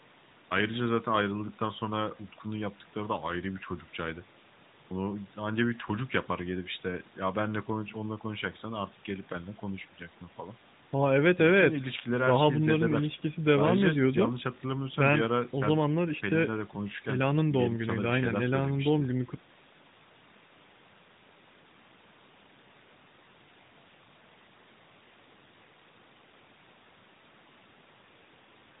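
No technical faults can be heard in the recording.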